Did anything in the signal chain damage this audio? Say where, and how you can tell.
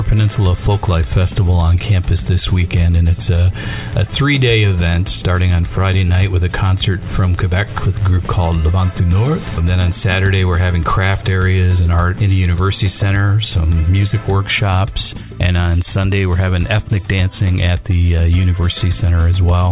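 No, nothing in the signal chain stood out as a problem on listening.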